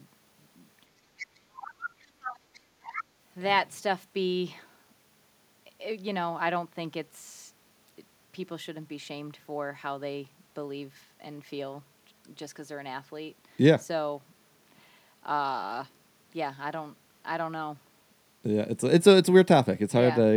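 From 0.85 to 1.95 s the echo canceller likely faced double talk, with both ends speaking at once, and could not tell the near talker from the loudspeaker echo, so it pulled the whole microphone signal down. The result is speech suppressed in double talk. For roughly a second in total within that span, the talker's speech dips and breaks up, sinking by as much as about 30 dB at its deepest.

Overlapping and following this, the other side's voice leaks through in short scraps. This is likely because the canceller left part of the loudspeaker signal in the microphone path. The leaks fall at 1.18 to 1.26 s and 1.65 to 1.70 s, sitting about 15 and 20 dB under the speech. A barely audible trace follows at 2.00 to 2.07 s, roughly 40 dB down. A longer stretch runs from 2.23 to 2.60 s at about 15 dB down, and the loudest scrap comes at 2.84 to 3.04 s, only about 10 dB below the talker.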